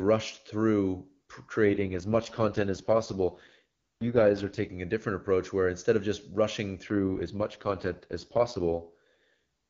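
From 1.66 to 4.70 s and again from 6.90 to 9.31 s, an AMR rate drop occurs. The network pushes the AMR-WB coder down to its lowest rates to free bits for error protection, which fits a fall from 23.85 to 6.6 kbit/s. The bandwidth holds and nothing drops out, but the speech turns rough, raspy and synthetic for each stretch. Between the drops, the clear sound fits HD Voice running at full rate.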